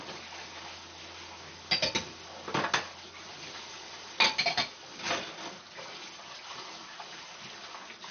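MP2 compression damage runs throughout the clip, from start to finish. The sound is dull, with nothing above about 6.5 kHz, and carries a gurgling, granular roughness that is plainly audible. The likely cause is MPEG Layer II coding at a very low bitrate, which fits a rate around 48 kbps. The encoder divides the spectrum into 32 sub-bands and has too few bits to share, so it shuts off the upper bands entirely and quantises the remaining ones coarsely.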